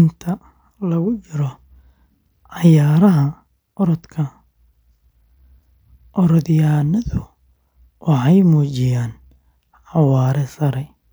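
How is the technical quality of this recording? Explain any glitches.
The technical quality of the recording is sound, with no glitches to explain.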